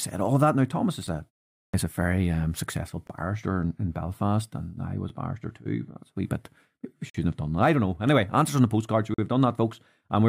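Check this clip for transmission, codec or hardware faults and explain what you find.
Two faults appear in the speech: repeated gaps between stream segments and one clipped start after a pause.

Gaps between stream segments fall at 1.07 s, 3.07–3.10 s, 5.09 s, 7.10–7.15 s and 9.14–9.18 s, lasting 6 to 48 ms. Adjacent stream segments don't quite meet in time, so the player fills each join with silence. The sound cuts out with hard edges, but nothing is lost. The regular 2-second spacing separates these gaps from random dropouts.

A clipped start after a pause occurs at 1.69 s. After 0.46 s of silence, the output device needs time to wake, and the first 50 ms of sound are swallowed. Speech resumes abruptly without its onset. Unlike the segment gaps, which only add silence, this loses audio.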